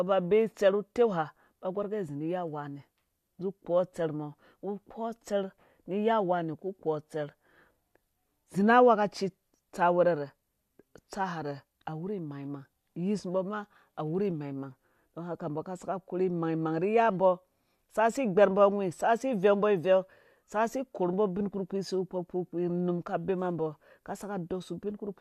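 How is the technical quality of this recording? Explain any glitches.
No glitches or faults present.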